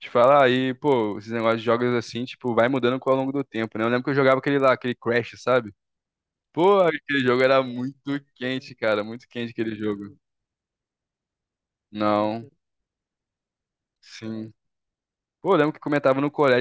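Throughout, a 25 Hz buzz rides on the speech. The resampler restarted on every block, converting 24 kHz to 16 kHz, leaving an error at each 40 ms block edge.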